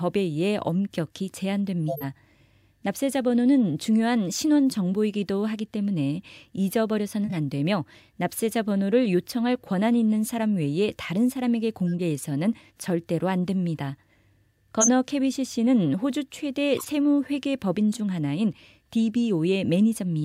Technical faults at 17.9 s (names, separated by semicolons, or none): corrupt frame decoded